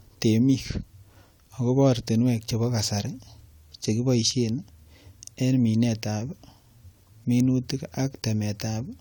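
Nothing in this speech recording gives away a technical problem at any point, so there's nothing here to track down.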